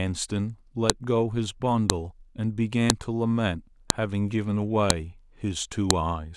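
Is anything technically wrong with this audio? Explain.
Yes. A file header is being played as audio. Sharp, loud clicks land at 0.90, 1.90, 2.90, 3.90, 4.90 and 5.91 s, one per second. Each marks the start of a one-second piece whose header bytes were decoded as samples, so the snap ignores the speech.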